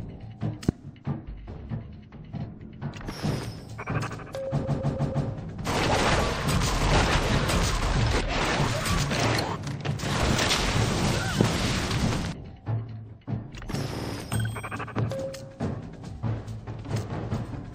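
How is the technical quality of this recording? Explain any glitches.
Not great: there's audible codec damage throughout, plus three pops and two stutters.

The MP3 compression is plainly audible for the whole clip: watery, swirly treble and smeared attacks, which fits a low bitrate around 64 kbps.

A loud pop, most likely from a static or switching spike, hits at 0.69 to 0.71 s, 11.41 to 11.43 s and 14.99 to 15.01 s, each sharp and about 20 dB above the sound.

Repeated frames cause two stutters. From 4.64 to 5.27 s a 157 ms chunk plays four extra times, adding about 0.63 s. From 13.97 to 14.12 s a 52 ms chunk repeats three extra times, adding about 0.16 s.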